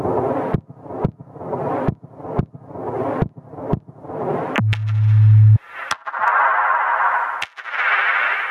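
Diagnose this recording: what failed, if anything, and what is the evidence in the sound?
Gain pumping throughout: the gain ducks roughly 25 dB under loud sounds, likely excessive input gain driving a fast limiter in the call processing.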